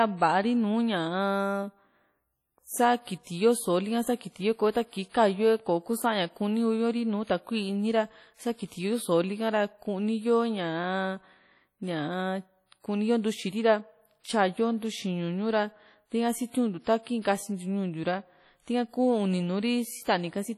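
Throughout the speech there is a ringing, washy quality with hiss that swells and fades with the signal, likely from heavy WMA compression at a low bitrate near 32 kbps. At 3.23 to 3.27 s, 5.09 to 5.14 s and 8.66 to 8.72 s, brief hiss runs ahead of sharp attacks, softening them. This is pre-echo: quantisation noise fills the quiet span of 37, 48 and 57 ms before each onset.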